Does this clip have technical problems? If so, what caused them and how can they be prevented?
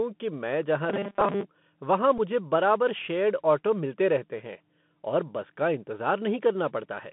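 Yes. The Bluetooth CVSD headset codec affects the whole clip. The sound is confined to roughly 150 Hz to 3.5 kHz, consistent with a narrowband headset link. Because each sample only nudges the level up or down, loud high content outruns the adapting step, so sibilants turn scratchy over a grainy hiss. Using a wideband headset profile such as mSBC or LC3, or a wired microphone, would prevent this.

Robotic sound from repeated short buffers runs from 0.90 to 1.45 s. A rigid, metallic buzz near 200 Hz replaces most of the real sound, which fits the software looping a roughly 5 ms chunk while fresh audio arrived too slowly. This was likely caused by an overloaded or starved audio thread. Larger buffers and less CPU contention would prevent it.

A Bluetooth headset packet repeated at 1.20 s and again at 2.18 s. Each time about 7.5 ms went missing, which fits two lost packets, and the chip decoded the previous packet again. 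Each event is heard as a brief tick or buzz. Keeping the headset close to the phone and away from Wi-Fi interference would prevent these repeats.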